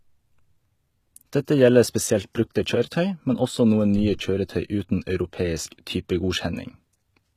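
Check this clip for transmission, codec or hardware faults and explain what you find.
Across the whole clip, the speech has the metallic, lispy treble of likely HE-AAC compression at a low bitrate, with rebuilt highs above a crossover and nothing past 14.9 kHz.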